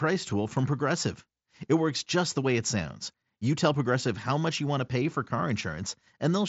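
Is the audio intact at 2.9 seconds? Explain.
Yes, the audio is intact at 2.9 seconds: the speech passes normally through the Bluetooth mSBC headset codec, which carries nothing above 7.7 kHz.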